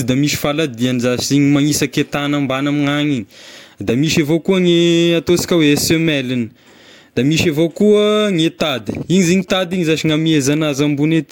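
GSM signalling bursts run from 8.78 to 9.50 s: a nearby 2G phone's radio pulses, rectified by the audio circuit, give a galloping dit-dit-dit of short 217 Hz buzzes well below the speech.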